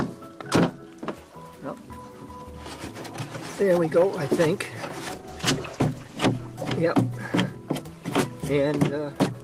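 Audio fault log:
5.16–7.53 s, call bitrate drop: the sound turns coarse and watery, with a duller top end, and sits at its roughest for about 1.05 s before clearing. The connection's bandwidth estimate sank and the encoder was forced to spend far fewer bits, which fits a fall from roughly 32 kbps to 15 kbps. With so little data, detail is quantised crudely and the highest frequencies are dropped until the rate climbs back.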